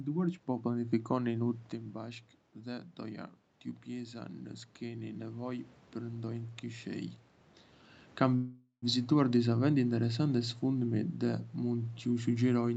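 From 3.98 to 7.15 s, automatic gain rising: the gain control, finding the input about 10 dB quieter, raised its gain about 4 dB, so speech and background swell slowly together. From 8.35 to 8.85 s, a call audio freeze: delayed packets likely drained the jitter buffer, so the sound stretches into a fading buzz or hiss with about 90 ms of silence, then resumes where it stopped, nothing lost.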